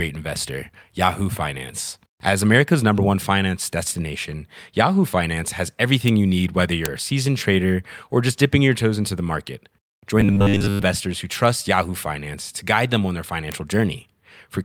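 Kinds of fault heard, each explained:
Bit error spike: A flipped bit in a digital sample makes its value jump by a power of two and snap straight back, so you get a single sharp tick that has nothing to do with the voice and is spread across the whole spectrum. There are four of them, at about 0.36, 6.08, 6.86 and 13.52 s, each just a dry click, gone as soon as it appears.
Robotic sound from repeated short buffers: From about 10.21 to 10.85 s the voice turns into a stiff, metallic buzz locked at 100 Hz while still loosely tracking the syllables. That's likely the playback side running short of fresh audio and looping the last chunk of about 10 ms to fill the gap, with most of that stretch made of repeats, so the real audio underneath is skipped.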